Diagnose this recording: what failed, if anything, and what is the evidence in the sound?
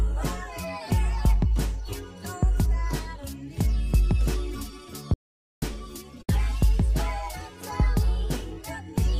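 Audio dropout to silence, 5.14 to 5.62 s. Sound cuts to total silence, no room tone. Likely an input-link failure, with the recorder writing silence.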